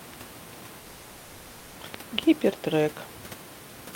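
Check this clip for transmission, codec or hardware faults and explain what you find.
The speech has one transmission fault, a long network dropout from 0.79 to 1.77 s. For nearly a second the original audio stops. The receiver fills the whole 960 ms gap, so the last sound carries on as a fading buzz that settles into a low steady noise, with no dead silence at any point. Speech then resumes mid-stream, with nothing from the gap. The likely cause is a run of lost network packets, which the receiver masked by extending what it had last heard. That continuous fill is what separates this from an outright mute or cut. Its length separates it from brief packet-loss glitches, which last only tens of milliseconds. The room noise, about 17 dB below the speech, stays in the background.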